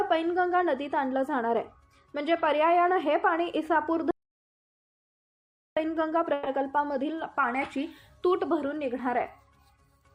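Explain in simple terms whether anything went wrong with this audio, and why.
Two things go wrong.

From 4.11 to 5.77 s there is an audio dropout to silence. The sound stops abruptly and leaves dead, total silence, without even faint background hiss, for about 1.7 s. That points to the input most likely being cut off, perhaps a loose connection or an accidental mute, while recording carried on writing nothing. Whatever happened in that stretch is lost, and the sound resumes mid-flow rather than where it stopped.

From 6.33 to 6.47 s there is a brief call audio freeze. Instead of going quiet, the last bit of sound is stretched into a short buzz for about 130 ms, and then the audio continues exactly where it left off. This is likely because data on a call arrived late and the receiver filled the wait. Unlike the dropout, nothing is missing and the gap isn't silent. Everything after it simply runs a fraction later.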